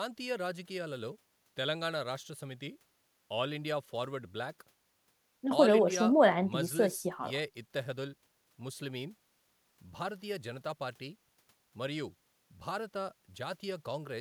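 No technical faults can be heard anywhere in this recording. The speech runs without any audible interruption or damage at any point.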